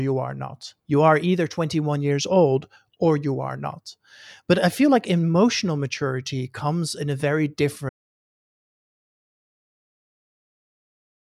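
Audio dropout to silence begins at 7.89 s, right after "comes in a very", and runs to the end of the speech clip, about 3.5 s of silence. The sound stops mid-phrase and never returns. No room tone or noise floor remains, only silence. The likely cause is lost input, such as a disconnected device, a failed link or an accidental mute, while the recorder kept writing silence. Whatever followed is unrecoverable.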